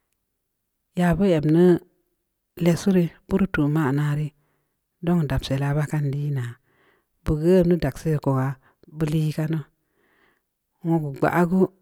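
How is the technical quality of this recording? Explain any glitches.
There is one glitch in the speech: at 4.47 s the audio jumps forward slightly rather than pausing. It sounds like a likely dropped buffer (overrun). The recording software did not collect a block of samples in time, the hardware overwrote it, and the audio on either side was butted together. Only about a millisecond and a half is missing. What you hear is the sharp step at the join.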